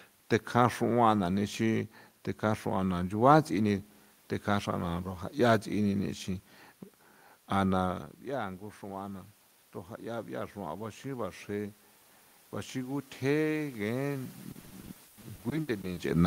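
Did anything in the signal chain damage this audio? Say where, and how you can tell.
Yes. From 8.29 s to 14.35 s the call processing's automatic gain rising brings the level up about 7 dB after the talker moves back around 8 s. The room noise swells along with the voice, which separates it from a talker simply coming closer.

At the network stage, from 14.51 s to 15.99 s, repeated packet loss gives a choppy, robotic sound. More than a dozen short holes, the longest 120 ms, are patched by stretching earlier sound. Their rapid recurrence distinguishes this from a single dropout.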